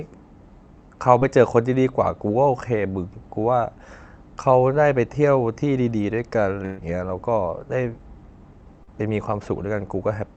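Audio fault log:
1.19–1.23 s and 8.83–8.89 s, short concealed packet loss: about 20 ms and 40 ms never arrived and were patched by extending the preceding sound, causing brief smears. On a spectrogram, blurred, frozen spectral content bridges each gap.
6.65–6.79 s, burst of packet loss: about 120 ms dropped in a row. The last sound is stretched and faded, then audio resumes further on. The spectrogram shows smooth repeated bands thinning, then an abrupt change, with no flat silence.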